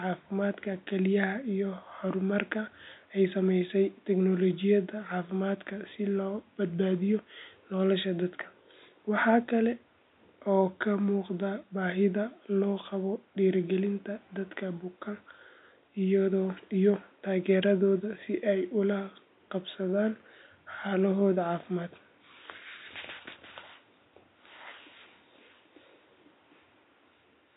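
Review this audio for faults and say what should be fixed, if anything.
Nothing stood out on listening, so there is nothing here that needs fixing.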